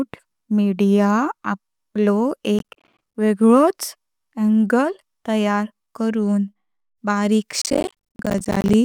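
Speech with processor overload crackle from 2.59 to 3.15 s and 7.62 to 8.74 s. Missed buffers of roughly 10 ms drop to silence, tearing the sound into gritty bursts.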